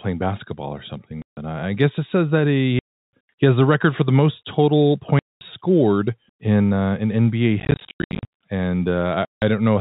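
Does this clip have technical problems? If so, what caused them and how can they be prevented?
Yes. The speech cuts to dead silence at 1.22–1.37 s, 2.79–3.12 s, 5.19–5.41 s and 9.25–9.42 s, and is broken by scattered short gaps, none longer than 90 ms, between 7.6 and 8.28 s. This is packet loss filled with silence: the receiver played nothing where packets went missing, and gap lengths in 10 ms steps fit 10 ms packets. Packet loss concealment at the receiver, together with forward error correction or redundant packets on the link, would prevent these holes.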